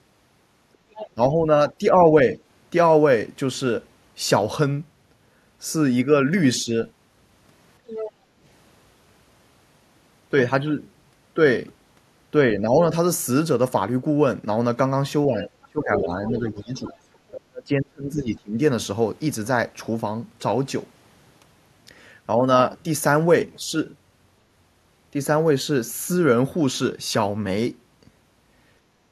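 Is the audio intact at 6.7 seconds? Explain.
No. Speech suppressed in double talk affects 6.64 to 6.76 s. For about a tenth of a second the speech level dips by about 5 dB, a brief, shallow duck rather than a full dropout. The likely cause is an echo canceller that met both sides talking at once, could not tell this talker apart from the loudspeaker's echo of the far end, and turned the near voice down along with it.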